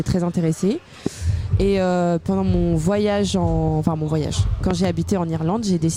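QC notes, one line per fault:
1.06–1.09 s, loud pop: a single sharp pop roughly 15 dB above the sound, which carries on beneath it, likely a brief voltage spike from a switch or static.
3.87–3.89 s, loud pop: one softer pop about 10 dB above the sound, likely another sudden voltage step briefly added to the signal.
4.71–4.87 s, loud pop: two pops in quick succession, peaking roughly 15 dB above the sound, likely a driver glitch or plug contact sending a double pulse.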